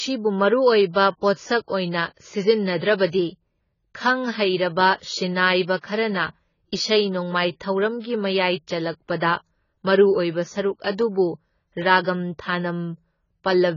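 From start to end, the speech is band-limited, with nothing above 7 kHz, and sounds dull and smeared. This is heavy damage consistent with AAC compression, likely AAC-LC at a very low rate, around 16 kbps, where the encoder discards high frequencies and coarsely quantises the rest.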